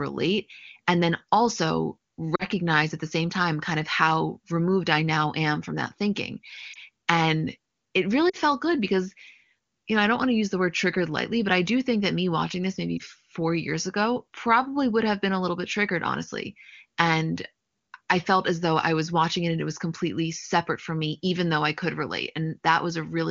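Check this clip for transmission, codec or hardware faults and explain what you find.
Four brief runs of lost AMR speech frames interrupt the speech at 2.35–2.44 s, 6.73–6.77 s, 8.29–8.36 s and 12.97–13.02 s. The single-frame losses sound like a short warble or dip, while the two-frame runs drop to near silence. Radio errors corrupted frames, so the decoder repeated the last pitch and vocal-tract settings at falling gain. The 40 ms events at 2.35 s and 8.29 s fit two consecutive 20 ms frames, and the others fit one frame. Unlike a packet-loss dropout, which cuts abruptly to silence, these concealed gaps smear the preceding sound briefly, then the speech resumes. The AMR wideband (HD Voice) codec itself sounds clean, consistent with its highest rate.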